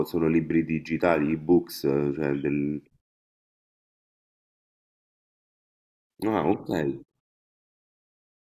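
Nothing stood out on listening to this speech recording.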